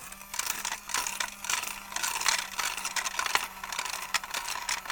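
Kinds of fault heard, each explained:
No kinds of fault are heard in these sounds.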